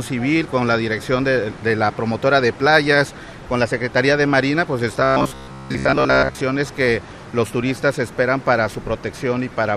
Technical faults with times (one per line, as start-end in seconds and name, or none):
5.00-6.41 robotic sound from repeated short buffers